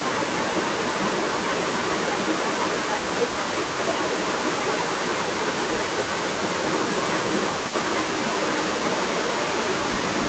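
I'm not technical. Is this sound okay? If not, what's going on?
No. Throughout the clip there is an echo leak: a faint copy of the speech comes back about a third of a second after the original. It is a repeat, not a dropout. The likely cause is a speakerphone whose echo cancelling let some sound slip through.

There is also speech suppressed in double talk: the speech dips or briefly cuts out at 0.89 to 1.0 s, 1.51 to 1.67 s, 4.45 to 5.92 s, 7.42 to 7.96 s, 8.39 to 8.47 s and 9.14 to 9.32 s. Unlike the echo, nothing is repeated. Instead, sound goes missing, most clearly around 4.5 to 5.9 s, likely because both sides talked at once.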